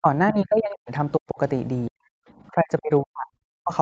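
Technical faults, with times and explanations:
0.00–0.07, 0.32–0.91, 1.17–1.39, 1.89–2.00, 2.52–3.31 and 3.61–3.73 s, speech suppressed in double talk: the voice sinks by up to about 40 dB, likely because the echo canceller muted everything during simultaneous talk.
0.27–0.32 s, other side's voice leaking through: a faint second voice, about 15 dB under the talker, slips past, likely from incomplete removal of loudspeaker echo.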